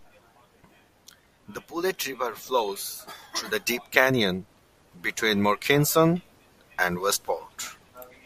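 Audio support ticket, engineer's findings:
No audible faults found in the speech recording; no dropouts, glitches or level anomalies identified, no component implicated, nothing to remediate.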